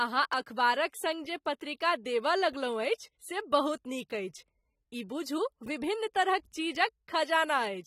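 AAC compression runs throughout this speech: the top end is missing and sibilants fizz and warble, which fits heavy quantisation at a low bitrate near 32 kbps, likely AAC-LC.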